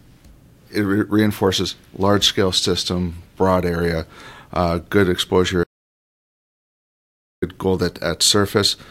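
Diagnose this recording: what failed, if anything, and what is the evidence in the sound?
An audio dropout to silence runs from 5.64 to 7.42 s, right after "broad area uh good": 1.79 s of silence, no room tone, likely a lost input link.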